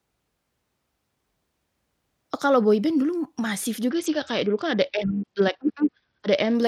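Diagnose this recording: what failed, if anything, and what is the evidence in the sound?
Bluetooth SBC bit pool drop at the codec stage, 3.90 to 6.55 s. Treble dulls and gritty noise rises. That fits the bit pool falling sharply, near 66 kbps.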